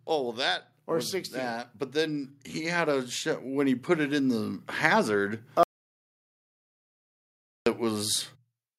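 A speech recording whose level, voice and background alike, climbs steadily from 0.07 s to 5.46 s, ending about 9 dB louder than it began. That slow, even swell is automatic gain rising: the gain control judged the input too quiet and kept turning it up over several seconds. Then, at 5.63 s, the sound cuts off into silence, with no room tone at all, until 7.66 s, a gap of about 2.03 s. This is an audio dropout to silence, likely caused by the input being lost while the recorder kept writing silence, so whatever was said in that stretch is gone.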